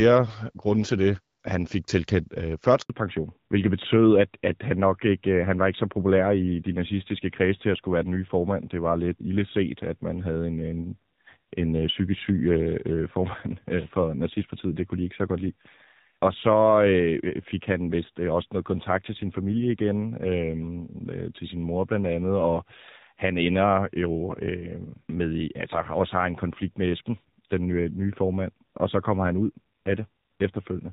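At 2.82 s the speech cuts out for 80 ms, until 2.90 s. This is a handover gap. The call switched networks and no speech frames arrived during the move. The sound fades within a few tens of milliseconds, then silence holds until the new link begins.

From 2.90 s to the end, the call shows a fallback to narrowband. Before the gap, the HD Voice codec sounds clear, which fits a rate around 12.65 kbit/s. Afterwards nothing remains above 4 kHz. The speech turns dull and rougher, which fits narrowband AMR at a low rate like 7.4 kbit/s.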